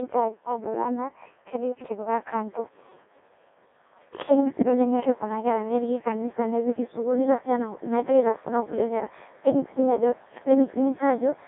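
Throughout, the speech sounds robotic and buzzy and stops above 3.8 kHz: a Codec 2 vocoder rebuilt it from sine waves, consistent with about 1.2 kbit/s.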